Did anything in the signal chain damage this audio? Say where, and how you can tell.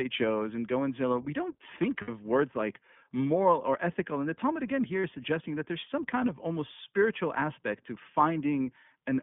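Yes. At the codec stage, the whole clip is band-limited to roughly 150 Hz to 3.5 kHz, and the speech has that slightly rough, synthetic edge of iLBC. The coding damage is plainly audible throughout, which fits the 20 ms, 15.2 kbps mode.

On the network side, there are two lost iLBC frame gaps. The first runs from 2.02 to 2.11 s, after "zillow we don't think" and before "words like moral", about 60 ms, consistent with three dropped frames. The second is around 40 ms, from 5.00 to 5.04 s, after "the talmud again here" and before "is suggesting that there's". Each gap gets filled with a buzzy, held repeat of the last pitch cycle, and the voice snaps back right away because each iLBC frame decodes on its own.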